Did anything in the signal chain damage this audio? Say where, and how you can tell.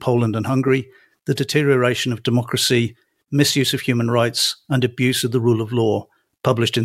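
No, nothing in the signal chain from capture to playback audibly damages this speech.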